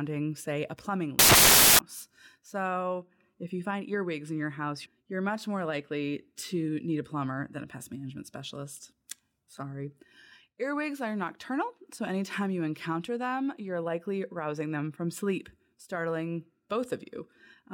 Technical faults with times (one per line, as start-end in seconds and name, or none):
1.19-1.79 samples built from the wrong bytes